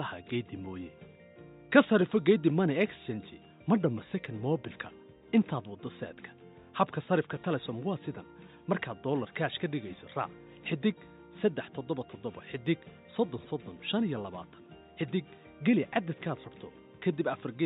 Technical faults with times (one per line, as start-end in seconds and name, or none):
none